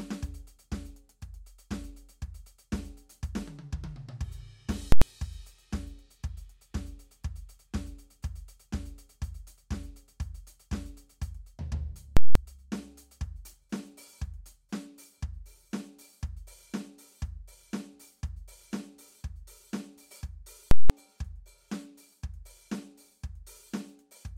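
Invalid numbers at full scale pin the music to the rails at 4.92 s (93 ms), 12.17 s and 20.71 s (186 ms each), giving loud pops, flat-topped waveform slabs and broadband spectrogram stripes.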